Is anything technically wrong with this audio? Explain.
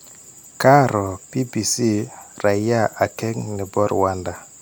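No, no technical faults heard.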